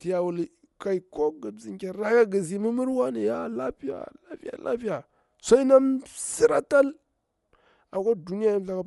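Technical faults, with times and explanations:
Throughout, Bluetooth LC3 compression. The sound carries a plainly audible breathy, grainy edge, and nothing is heard above 11.5 kHz. The likely cause is the LE Audio transform codec dropping upper spectrum and filling gaps with noise, which fits 10 ms frames near 48 kbps.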